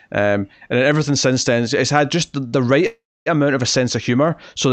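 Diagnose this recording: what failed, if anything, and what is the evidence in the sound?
A late packet emptied the jitter buffer, causing a short stall from a late packet: after "had just", the last sound is held 51 ms (2.47–2.55 s), then "the right amount of" resumes.

A call audio freeze, likely from packets held up in the network draining the jitter buffer: after "had just the right", 2.87–3.28 s is filled, mostly 270 ms of silence, before "amount of a sense".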